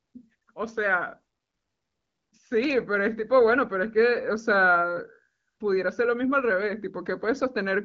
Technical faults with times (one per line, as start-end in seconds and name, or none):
2.64-2.73 loud pop